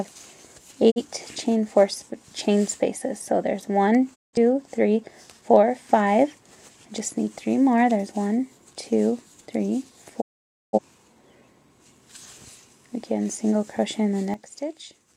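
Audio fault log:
0.90–1.02 s, 4.14–4.37 s, 10.20–10.79 s: digital broadcast dropout. Sound fades out over about 20 ms into total silence, then returns. The holes last 43, 171 and 512 ms, which fits whole lost frames of roughly 43 ms each. The receiver muted rather than dimmed, so nothing sent in between survives.
14.34 s to end: sudden gain jump. Level steps down by about 12 dB between adjacent samples, with sound and background noise falling together, and it stays lower to the end. There is no silence and no recovery, unlike a dropout. The likely cause is a gain setting applied without a ramp.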